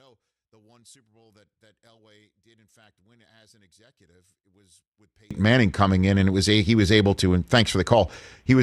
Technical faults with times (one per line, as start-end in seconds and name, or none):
0.00-5.31 one channel inverted